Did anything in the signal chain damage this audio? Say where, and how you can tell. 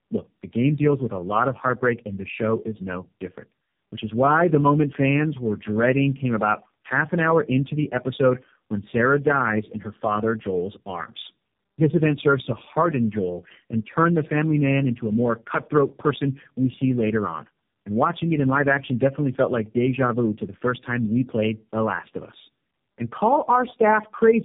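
Yes. At the codec stage, the call passed through tandem speech coding, about three low-rate speech coders in a row. Each re-encoded the previous one's degraded output. Throughout, the speech sounds rough, muffled and warbly, with nothing above 3.7 kHz.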